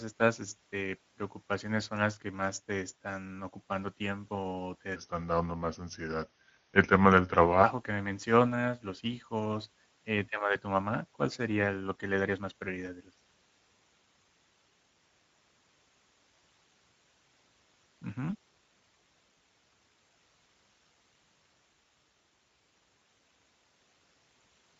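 Speex codec damage runs through the whole clip. This CELP speech coder models the voice as a filter driven by an excitation signal, and here it has too few bits to describe that excitation faithfully. The speech comes out plainly noisy and hoarse, which fits a wideband mode running at roughly 17 kbps. What lies above 4 kHz is a shaped, hissy fill rather than true detail.

A section at the wrong speed runs from 4.96 to 7.64 s. The playback rate drops to 0.867 of normal, so speed and pitch fall together. The voice sounds about three semitones deeper and noticeably slower, then snaps back to its normal rate at the end of the stretch. The likely cause is that this segment was played or rendered against a mismatched clock, stretching it out in time.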